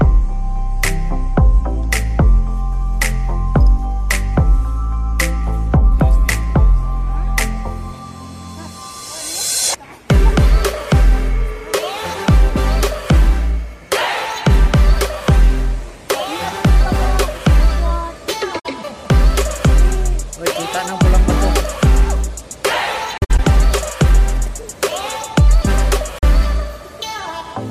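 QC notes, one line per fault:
18.59 to 26.24 s, AAC frame loss with muting: three soft-edged dropouts where the sound fades to silence and back. At 18.59 s about 64 ms vanishes, at 23.18 s a stutter of short gaps spreads over about 213 ms (the longest around 70 ms), and at 26.19 s about 43 ms goes. Lost frames were decoded as zero spectrum, and the overlapping windows smooth the edges, which fits frames of roughly 21 ms.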